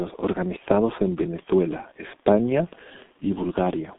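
Throughout, heavy G.723.1 codec damage, fitting about 6 kbit/s, leaves speech muffled and hoarse; the spectrogram shows nothing above 3.7 kHz and smeared consonants.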